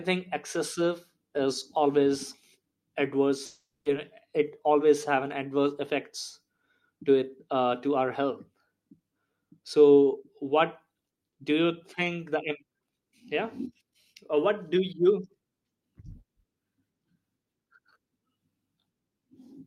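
A long network dropout runs from 3.45 to 3.87 s. The speech breaks off and the last sound is stretched into a fading buzzy hiss that lasts most of the gap, followed by roughly 130 ms of near silence before speech resumes. About 400 ms of speech never returns. The likely cause is a run of audio that never reached the receiver, which padded the hole with a decaying continuation of what it last had and then jumped ahead.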